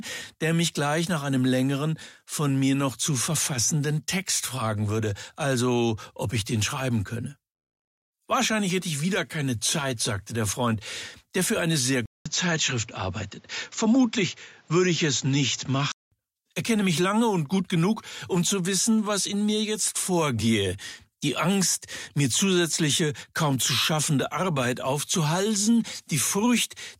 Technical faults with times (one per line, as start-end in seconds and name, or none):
12.06-16.12 input switched to a poorer device